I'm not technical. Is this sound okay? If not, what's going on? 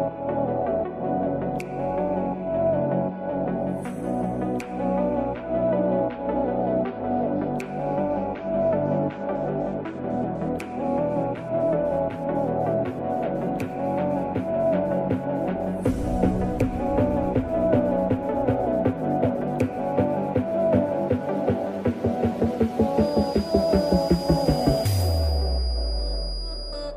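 No. From about 22.92 s to the end there's a feedback whistle: a thin, steady high tone near 4.9 kHz sitting fairly quietly under the sound and swelling and fading slowly. It's likely a speaker feeding back into the microphone, sitting right at the edge of howling.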